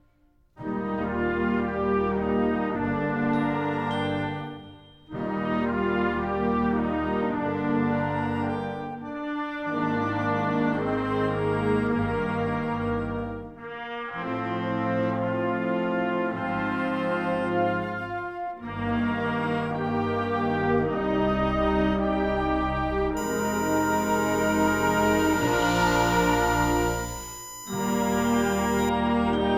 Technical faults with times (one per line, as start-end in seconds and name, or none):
23.17-28.89 USB whine